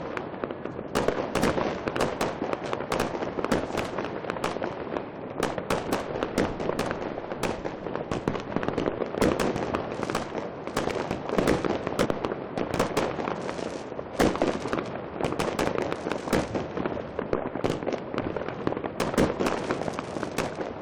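Four brief glitches come from damaged data in a compressed stream. The first falls at 5.54 to 5.56 s. The second is a single blip at 8.60 s. The third sits at 12.04 to 12.06 s, and the fourth at 14.13 to 14.15 s. Each lasts about 20 ms or less. At each point, part of the encoded data was corrupted. The decoder misread those frames and lost its place. It then had to find the next valid frame. Each event is heard as a short chirp, squawk, click or brief hole in the sound.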